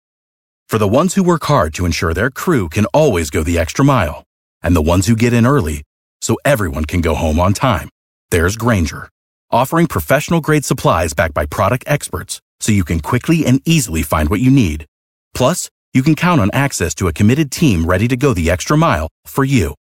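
No technical faults are audible anywhere in this speech recording.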